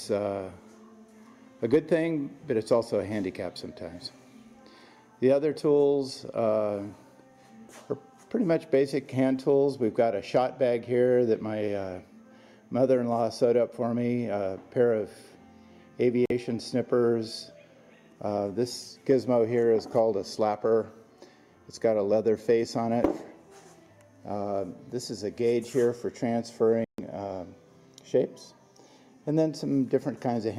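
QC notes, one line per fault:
16.26–16.31 s and 26.84–27.00 s, corrupt frame muted: the sound cuts abruptly to silence, about 56 ms and then 152 ms, which fits a couple of damaged frames and then roughly six. The decoder rejected them and the player filled the gaps with silence, so timing stays intact.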